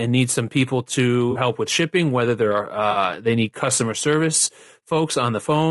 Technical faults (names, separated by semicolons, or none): low-delay AAC compression; AAC frame loss with concealment